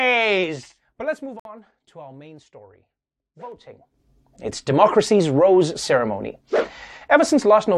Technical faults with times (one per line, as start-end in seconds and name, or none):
0.38-1.94 zipper noise
1.40-1.45 gap between stream segments
3.50-4.04 zipper noise